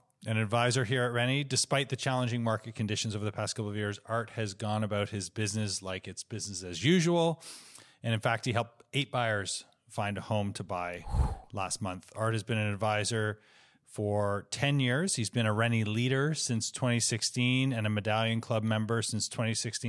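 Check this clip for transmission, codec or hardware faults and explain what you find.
No faults turn up when checking this clip.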